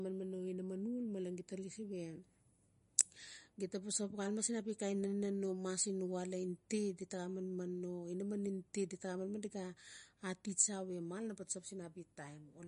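The speech appears to have been encoded with MP3 compression, likely at a low bitrate around 40 kbps. Starved of bits, the encoder removed everything above 10.6 kHz and let weak frequency lines flicker on and off, so the whole clip sounds dull, watery and swirly, with smeared consonant attacks.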